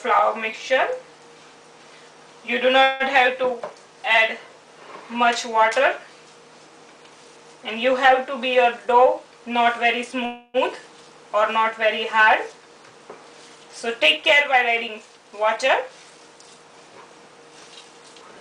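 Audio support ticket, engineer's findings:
Call audio freeze, 2.83–3.03 s and 10.25–10.57 s: last sound held as a fading buzz for about 165 and 286 ms. Likely jitter buffer underrun from delayed packets. Sound resumes where it stopped with nothing lost, unlike packet loss.

Jitter buffer speed-up, 8.74–10.19 s (107%), 14.16–16.18 s (108%), 17.81–18.37 s (120%): audio hurried, pitch unchanged. Pitch-period cuts of roughly 100, 150 and 150 ms drain excess buffer. A resampling error would shift pitch.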